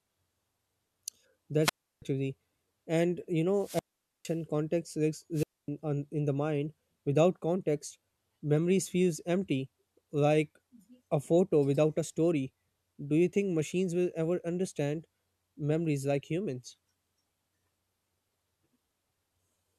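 Hiss swells, then the speech drops to near silence for 0.33 s at 1.61 s, 0.46 s at 3.56 s and 0.25 s at 5.34 s: wireless microphone squelch dropouts, where fading radio signal triggers receiver muting.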